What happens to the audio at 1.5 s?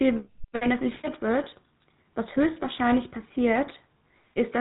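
Just before 1.5 s, from 1.44 to 1.47 s, there is a case of lost GSM frames. The gap fits a single 20 ms frame. The decoder fills it by repeating the parameters of the last good frame, so the sound holds briefly as a rough, metallic ring instead of dropping out. The loss is too short for the concealment to fade toward silence, so it comes through as a short tonal smear.

Underneath that, and across the whole clip, is the GSM full-rate codec damage, which is plainly audible. The speech passes through a vocal-tract model driven by regularly spaced pulses, with only every third excitation sample kept, at a rate consistent with 13 kbps. Nothing above 4 kHz survives. The result is a buzzy, gravelly roughness on the speech, and the concealed frame at 1.44 s sits inside that texture.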